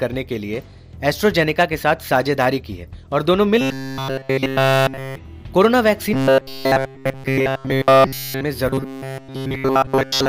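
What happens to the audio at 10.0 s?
At 10.0 s you're in the middle of robotic sound from repeated short buffers, running from 8.69 s to the end. Essentially everything there is a loop of a tiny fragment, likely from audio arriving too slowly, which stamps a rigid, metallic 134 Hz buzz onto the sound.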